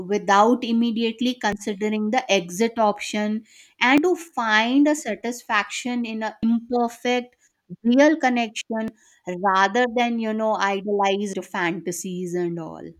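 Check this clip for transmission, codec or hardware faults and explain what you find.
The speech has one recurring fault at 1.52, 3.98, 6.43, 8.88 and 11.33 s: abrupt skips, each dropping roughly 50 ms. This is likely audio missing between chunks, lost as the recorder closes one 2.5 s chunk and opens the next.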